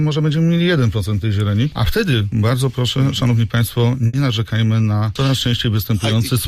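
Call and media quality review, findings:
Burst of packet loss, 4.07 to 4.15 s. Several consecutive packets dropped or arrived too late for playout; receiver concealment extended the last sound for about 60 ms while fading it down. Heard as a brief held, decaying tone or hiss, then an abrupt resume further on, with about 60 ms of audio skipped.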